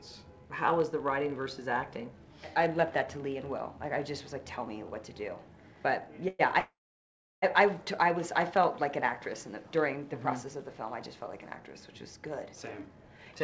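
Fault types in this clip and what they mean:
call audio freeze: Late packets likely stalled playback. At 6.28 s a 0.11 s gap is filled; at 6.59 s a 0.83 s gap fades to silence.
jitter buffer speed-up: From 12.49 s to 13.4 s, short pieces are cut to reduce delay. Sound runs at 110% speed, pitch unchanged.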